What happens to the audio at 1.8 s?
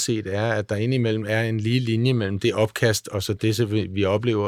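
Nothing goes wrong at 1.8 s; the speech carries on intact through that moment, with no dropout, click, distortion or other fault.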